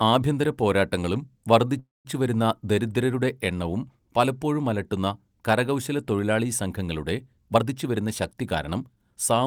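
Speech that halts for about 0.25 s at 1.79–2.07 s, right after "ആഭ്യന്തര പോരാട്ടങ്ങളും": a brief fading buzz, then about 180 ms of silence, before resuming with nothing lost. That is a call audio freeze, likely from delayed packets emptying the jitter buffer. From 7.48 to 9.13 s, after "പലപ്പോഴും അലട്ടുന്ന കരകൗശലത്തൊഴിലാളി സംഘങ്ങളുടെ", delivery sounds hurried at unchanged pitch, running at 115% speed. This is a jitter buffer speed-up, trimming about a third of a second of pitch periods to cut the built-up delay.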